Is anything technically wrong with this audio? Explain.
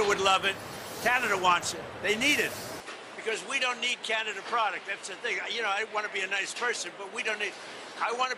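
Yes. From 2.80 s to the end, the input likely switched to a poorer device: with no gap at the change, the sound loses everything above 11.4 kHz, drops roughly 5 dB in level, and gains a new background noise floor about 30 dB down.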